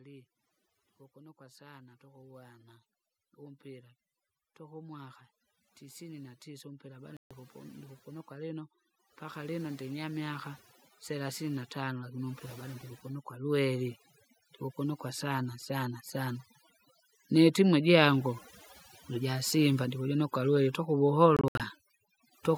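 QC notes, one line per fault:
Throughout: overdone noise removal. The noise reduction is set far too hard, so frequency bands near the estimated noise floor are pushed down or switched off, taking quiet parts of the speech with them. The background sinks to near silence dotted with twinkling specks.
4.56–10.5 s and 11.07–13.97 s: automatic gain rising. The gain control judges the input too quiet and raises its gain gradually, by about 12 dB across the first span and about 6 dB across the second. Speech and the residual background swell together.
7.17 s and 21.37–21.6 s: Bluetooth dropout. The output cuts to silence with abrupt or briefly faded edges and resumes further on, as if playback had continued underneath, likely from packets missing their deadline to the headphones. The first hole is a single 139 ms gap, fitting about six lost packets. The second loses 139 ms scattered over 232 ms, with the longest gap about 70 ms.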